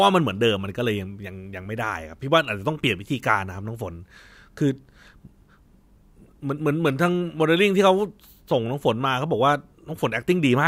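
No technical faults can be heard anywhere in the recording. Nothing interrupts or alters the speech at any point, so there is no event to place on the timeline.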